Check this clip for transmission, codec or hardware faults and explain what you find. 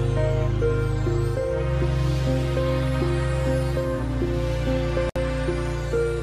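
There's one fault to flag. From 5.09 to 5.16 s there's a gap at a join of encoded pieces. Chunks of about 6 s were encoded separately and joined with their start delay and end padding left in, so a gap of roughly 63 ms cuts in, its edges smeared so the silent part is shorter, before the sound resumes where it stopped.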